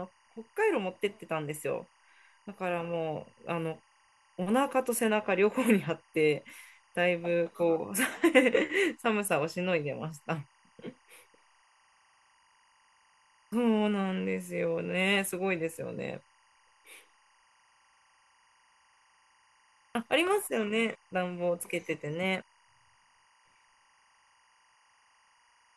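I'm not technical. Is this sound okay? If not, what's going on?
No. Throughout the speech there is a faint, steady chirping warble in the background. This is timecode bleed. Timecode is a signal that keeps recording equipment in sync, and it normally runs on its own track. Here it has leaked into the audio track. It flips rapidly between two high pitches, around 1 kHz and 2 kHz. Its rhythm matches the 23.976 frames per second film rate. It sits quietly under the voice, but it never stops.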